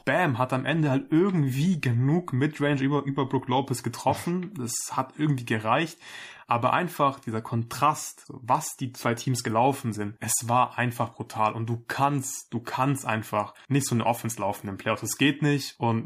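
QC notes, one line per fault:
No faults found on listening.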